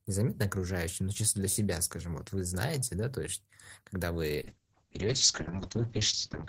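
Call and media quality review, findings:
Call bitrate drop, 4.41 s to end, after "да то есть когда": speech rough and muffled, cut off above 8 kHz; fits Opus encoder dropping from 32 to about 6 kbps.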